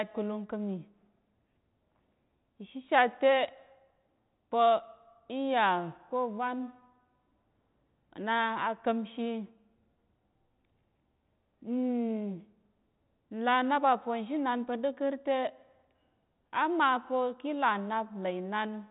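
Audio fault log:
No faults heard.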